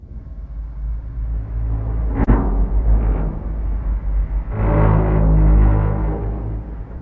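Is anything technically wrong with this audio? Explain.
Yes. Around 2.24 to 2.30 s there is a brief smear and wobble where the sound seems to stretch rather than move on. This is short concealed packet loss: about 30 ms of the stream arrived too late to decode, so the receiver extended the preceding sound and cross-faded back into the real audio. The call path itself can be heard as a band limit, with nothing above 8 kHz.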